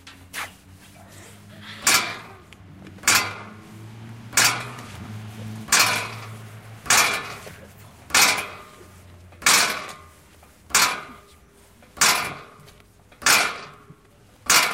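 From 12.57 s to 14.64 s the sound is broken by periodic USB or driver dropouts: roughly every 0.09 s, something stalls the audio path and about 10 ms of signal is skipped outright rather than filled with silence. The result is a rapid, even ticking, around twenty clicks in all. On the waveform each skip shows as an abrupt jump, and the spectrogram shows a row of thin vertical broadband lines spaced 90 ms apart.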